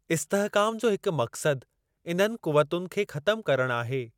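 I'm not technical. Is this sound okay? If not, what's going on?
Yes, nothing in this recording stood out as a problem when I listened to it.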